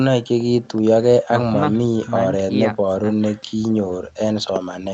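No faults are audible in this speech; the content above 8 kHz is missing because it came through a call's microphone processing and a wideband call codec, which is normal band-limiting for that path.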